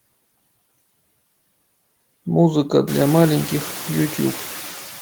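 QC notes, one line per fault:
Throughout, noise suppressor artifacts: the background noise drops away in the gaps between words and swells back up underneath them, giving a pumping, gated feel, with the noise pulled down by about 16 dB when no one is speaking. The suppressor estimates which frequency bands hold steady noise and attenuates them frame by frame, easing off wherever speech energy dominates. The room noise itself jumps by about 21 dB at roughly 3 s, settling about 15 dB below the speech.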